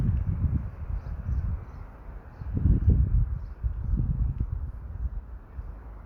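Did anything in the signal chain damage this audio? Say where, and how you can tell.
Yes: a crude rate conversion from 44.1 kHz to 48 kHz by unfiltered linear interpolation, throughout the clip, leaves a faint inharmonic fizz, roughly 60 dB below the sound.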